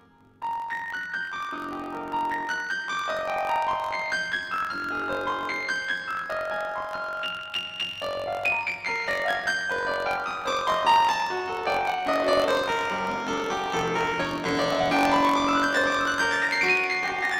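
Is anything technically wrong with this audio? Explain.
Yes. The music has planar audio read as interleaved, present throughout the clip. Each block of about 21.8 ms stores all left-channel samples followed by all right-channel samples, but playback treats it as alternating left-right pairs. Each block therefore plays twice at double speed, first the left half and then the right, so the overall tempo holds while the pitch rises 12 semitones, a full octave. The repeats at 45.9 Hz add a buzzy, robotic flutter.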